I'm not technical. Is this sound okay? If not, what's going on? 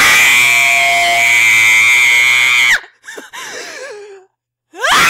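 No. From 0.44 to 1.50 s there's a loudspeaker feedback squeal. A microphone hears its own speaker, and a 693 Hz tone swells over about half a second.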